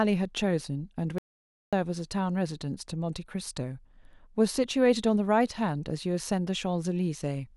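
A speech clip with an audio dropout to silence from 1.18 to 1.73 s, about 0.54 s lost. Unlike a natural pause or noise gating, the gap holds no room tone at all, pure silence cutting in mid-flow, likely from the input briefly disconnecting or muting.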